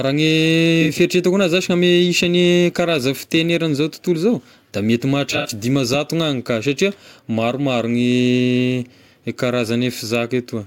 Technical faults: AAC frame loss with concealment

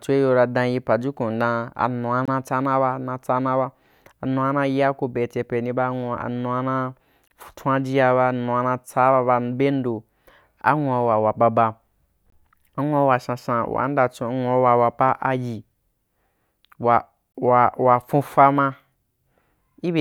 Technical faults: gap between chunks

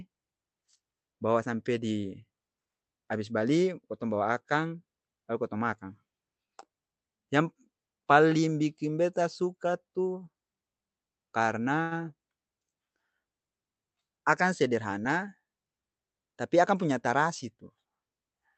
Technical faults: short stall from a late packet; jitter buffer speed-up

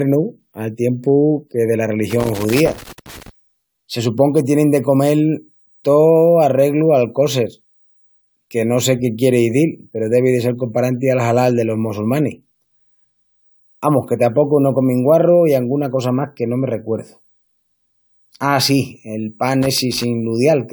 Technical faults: generation loss; loose connector crackle

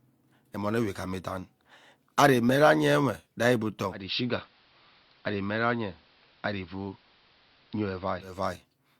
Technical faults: digital radio blending to analogue

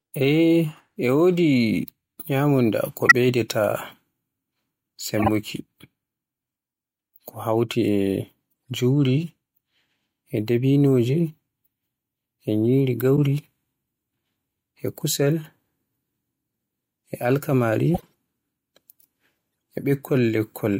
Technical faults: corrupt frame decoded

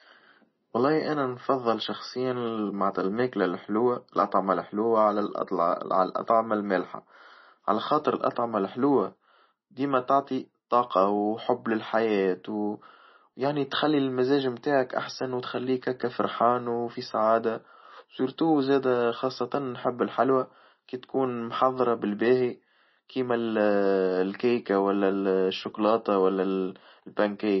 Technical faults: MP3 compression

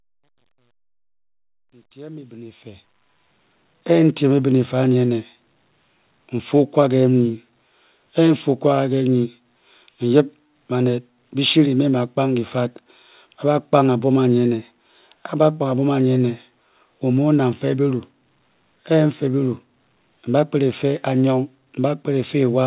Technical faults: truncation distortion on a fade

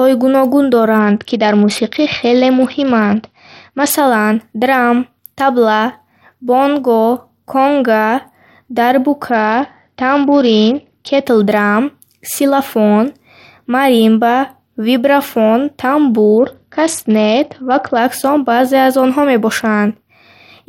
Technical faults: Bluetooth SBC bit pool drop

